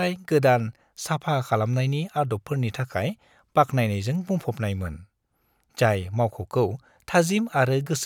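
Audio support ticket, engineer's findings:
Listened through the speech recording and nothing stood out as a fault, so no component to point at and nothing to chase on this one.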